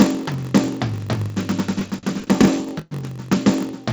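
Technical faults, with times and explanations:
Throughout: block size mismatch (padded). Each 1024-sample block read downstream holds a shorter block plus zeros, which fits 960-sample writes. The recurring silent gap produces a 46.9 Hz buzz, and the music runs at 0.938 times normal speed with pitch essentially unchanged.
1.79 to 2.93 s: repeated stalls (stutter). The jitter buffer emptied 12 times, and the receiver extended the last sound each time, 313 ms in total, with the longest wait 112 ms. Nothing is lost, but 29% of this span is concealed, so the music drags and hiccups. The G.722 path leaves nothing above 8 kHz.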